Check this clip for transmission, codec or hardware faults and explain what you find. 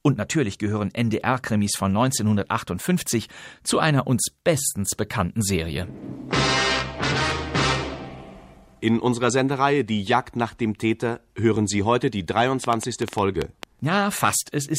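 There's one fault: a train of clicks from 12.64 to 13.64 s, about 8 per second at an uneven pace, roughly ten pulses of much the same shape standing well above the surrounding sound. It's likely interference or a faulty connection or power supply injecting repeated pulses, heard as irregular ticking.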